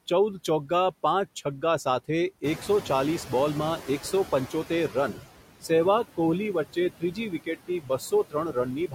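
Throughout this speech clip the background pumps, sinking between words and swelling back under them. These are noise suppressor artifacts: the suppressor cuts the noise by about 17 dB, band by band and frame by frame. At around 2.5 s the room noise jumps by about 13 dB. From 2.43 s to 5.21 s that louder noise first comes through only lightly reduced and then fades over about 2.8 s as the noise suppressor catches up. Its noise estimate lags the sudden rise, so the cut starts small and grows to about 12 dB. Between 6.73 s and 8.12 s, short stretches totalling roughly 0.4 s of speech turn faint and swallowed, dropping by up to about 17 dB. This is speech cut by the noise suppressor, which mistook those softer parts for noise and turned them down with the background.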